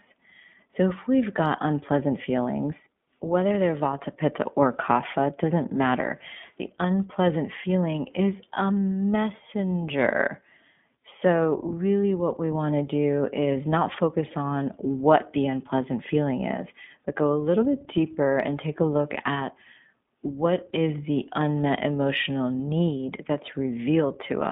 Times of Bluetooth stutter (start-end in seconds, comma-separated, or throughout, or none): none